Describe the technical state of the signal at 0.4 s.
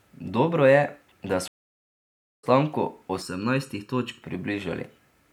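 At 0.4 s the speech signal is intact, with no technical fault audible at that moment.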